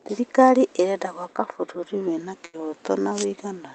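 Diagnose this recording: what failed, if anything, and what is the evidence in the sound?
At 1.95 s the speech drops in pitch by about 112 cents, just over a semitone, and slows by 6.3%, staying that way to the end. A single step like this, with pitch and speed moving together, is the signature of a drift correction step, likely from clock-matching software at the buffer stage changing the playback rate at once. On a spectrogram every harmonic steps down together at 1.95 s. On the waveform the pitch periods lengthen from that point on.

From 2.45 s to 2.55 s there is a burst of packet loss on the network side of the call path. The jitter buffer's concealment sustains the last sound for about 78 ms, fading it out, and then the speech resumes with about 80 ms of material skipped. On a spectrogram this shows as flat, smeared bands that dim under the Opus codec's 8 kHz ceiling, then a sudden vertical jump into different content. 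The waveform shows the continued sound shrinking in amplitude, then an abrupt discontinuity.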